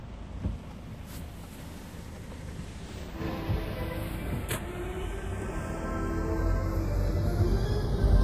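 Channels drifting apart throughout this recording of sounds: the left and right sides appear to come from devices on separate clocks, roughly 30 ppm apart, so their offset creeps to about 0.2 ms. Summed to mono, comb notches glide slowly, giving a slow flanging.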